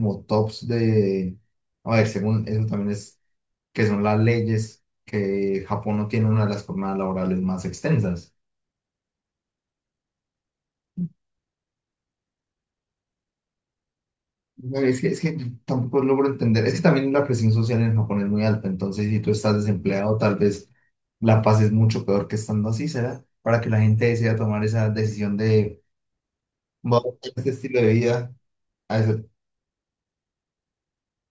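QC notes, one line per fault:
No fault to log in these QC notes.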